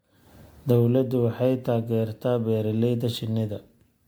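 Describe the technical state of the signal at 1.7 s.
At 1.7 s the speech carries generation loss, present throughout the clip: a swirly, smeared, hollow texture with blurred attacks, beyond what one pass near 96 kbit/s would cause, likely from about five successive MP3 re-encodes, each requantising on a shifted frame grid.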